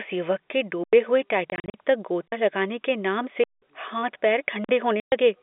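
At 0.84 s, right after "युवक के", the speech drops to digital silence for about 93 ms and then returns abruptly. This is a block of digital silence: a buffer went unfilled, which fits a 4096-sample block. Between 1.50 and 1.74 s, packet loss filled with silence chops the speech into holes totalling 140 ms, the longest run 40 ms, consistent with 20 ms packets replaced by zeros. Further silent blocks follow at 2.28 s (46 ms, just before "लगाने के नाम"), 3.44 s (186 ms, after "लगाने के नाम") and 4.64 s (46 ms). Their lengths fit 2048-, 8192- and 2048-sample buffers. At 5.00 to 5.12 s, more packet loss leaves a 120 ms hard-edged gap. All of these faults sit on a narrow G.711 telephone-band path of roughly 250 Hz to 3.6 kHz.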